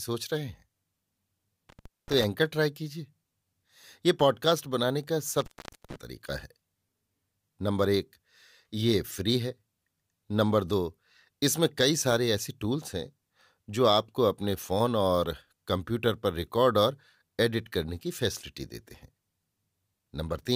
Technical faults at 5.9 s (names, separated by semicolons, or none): intermittent contact